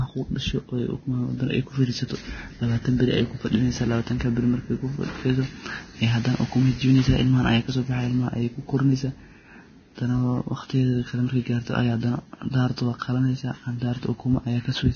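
From start to finish the speech has nothing above 6.5 kHz, and the treble below that edge is hissy and grainy, with roughened tones and softened consonant onsets. This is likely heavy Vorbis compression at a very low bitrate, around 19 kbps. The codec keeps a coarse spectral outline and quantises the fine upper detail so crudely that it turns into noise. On a spectrogram the energy stops at a flat ceiling, with speckled, smeared texture beneath it instead of clean harmonic lines.

Pre-echo appears twice near the end. At 12.76 s a short hiss runs about 18 ms ahead of a sharp onset. From 12.99 to 13.02 s a similar hiss spreads about 30 ms before the next attack. In both places the codec's quantisation noise is spread across a whole transform block, so noise sized for the loud onset also fills the quiet moment before it. Each attack sounds blurred. The waveform shows a low fuzzy ramp before the transient, and the spectrogram shows a thin vertical smear just ahead of it.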